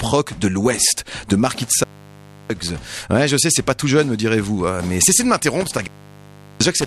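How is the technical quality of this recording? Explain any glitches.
Technical quality is marred by two dropouts from an intermittent contact. The first falls between 1.63 and 2.71 s, the second from 5.61 s to the end. A loose cable or plug briefly loses its connection. The signal path opens, for about 0.66 s the first time and about 0.74 s the second. The sound cuts out abruptly, with crackle at each edge as the contact breaks and remakes. Faint hiss remains while the line is open.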